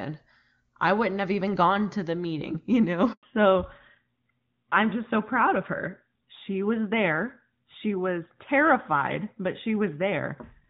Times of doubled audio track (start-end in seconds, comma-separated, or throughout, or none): none